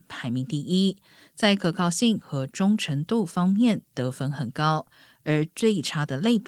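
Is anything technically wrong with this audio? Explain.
No, nothing technically wrong can be heard here.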